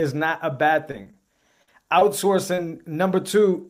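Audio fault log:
0.91–0.95 s, 1.03–1.07 s (both just after "not a bad"), 1.11–1.15 s, 1.63–1.69 s, 1.99–2.03 s, 2.55–2.59 s: short concealed packet loss. About 20 ms of speech is missing at each point, and about 40 ms at 1.63 s. The decoder fills each gap by extending the preceding sound, which is heard as brief smears or wobbles.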